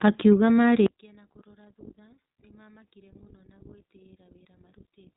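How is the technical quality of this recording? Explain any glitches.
The recording has two clear problems. The whole clip carries narrowband codec damage, and from 0.86 s to the end the speech collapses to a faint trace.

The iLBC codec effect runs throughout. The speech sounds boxed-in and slightly rough and synthetic, with no content above about 3.8 kHz, so sibilants and air are missing. The codec models the excitation of each short frame independently of the one before. The texture here fits 20 ms frames at roughly 15 kbps, and that frame-by-frame coding causes the grainy, artificial edge.

The one channel inverted fault starts at 0.86 s and lasts to the end. The speech drops by about 33 dB and is left faint, close to vanishing. The likely cause is that one stereo channel has reversed polarity. When the channels are summed to mono, the centred speech shared by both cancels out. Only the small difference between them survives, and that is the faint residue heard here.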